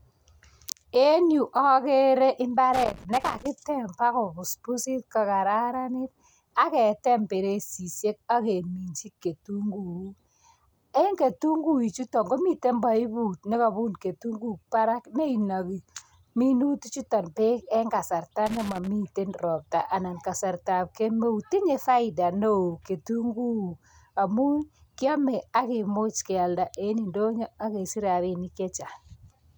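At 2.73 to 3.46 s, and again at 18.46 to 18.87 s, there's loose connector crackle: a worn or dirty contact keeps making and breaking, chopping the speech, so you hear a ragged burst of scratchy crackle each time.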